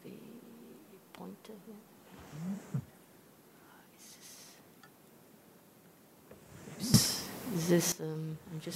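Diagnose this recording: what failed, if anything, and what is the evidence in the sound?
At 6.94 s the whole signal leaps up by about 16 dB in a single step, the background noise rising right along with the sound, and it stays at that raised level until 7.92 s, when it drops back just as abruptly. This is a sudden gain jump. Because the noise floor moves in lockstep with the wanted sound, the change sits after the microphone, in the digital gain stage, most likely a gain setting or bit shift applied instantly rather than ramped in.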